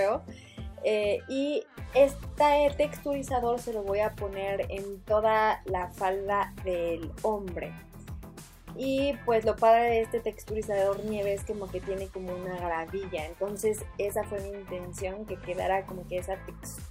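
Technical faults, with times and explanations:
0.12 to 16.84 s, clock slip clicks: faint ticks recur about ten times a second, roughly 150 in all. Each tick is one sample dropped or repeated. The steady rate likely comes from two unsynchronised clocks drifting apart by around 200 ppm.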